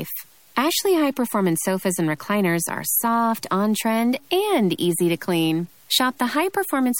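Throughout the speech there is grainy distortion that moves with the sound. Quiet passages turn gritty, and the softest moments sputter or drop out. The cause is likely low bit depth without dither: truncation to about 8 bits, leaving error roughly 35 dB below the speech.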